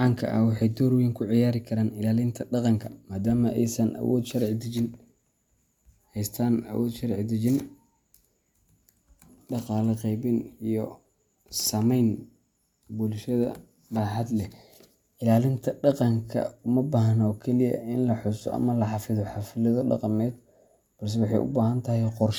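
No technical faults can be heard anywhere in the speech recording, and the signal holds steady throughout without any audible disruption.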